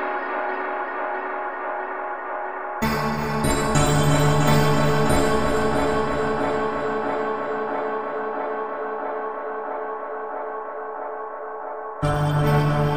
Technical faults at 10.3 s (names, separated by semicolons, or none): none